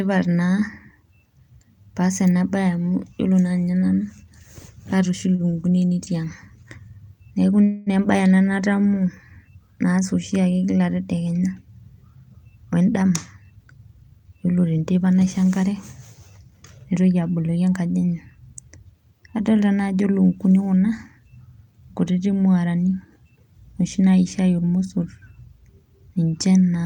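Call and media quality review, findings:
Short stall from a late packet at 5.35–5.42 s and 5.51–5.55 s, right after "kaata oshi": jitter buffer ran dry, sound held 33 ms then 18 ms with a faint buzz or dip, nothing lost.

Call audio freeze at 7.64–7.90 s: about 230 ms of stretched, fading buzz or hiss, then the audio picks up where it left off. Likely packets held up in transit emptying the buffer.

Jitter buffer speed-up at 12.80–13.43 s (106%, roughly 50 ms trimmed) and 13.86–15.10 s (113%, roughly 150 ms), ending before "naisho enkare": pitch-period cuts to shed backlog, sounds hurried.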